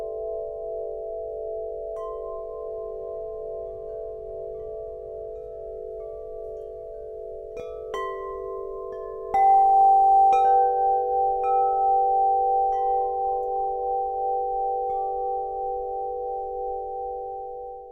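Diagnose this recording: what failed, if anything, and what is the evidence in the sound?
The converter's clock slips from about 5.99 to 10.45 s. That's sample clock jitter: samples land a touch early or late, around a microsecond of wobble, and the error scales with how steeply the waveform is moving. So you get a fine hiss or grit riding on the loud, bright passages, sitting very roughly 45 dB under the signal, and it disappears in the quiet gaps. Nothing else in the clip points to a fault.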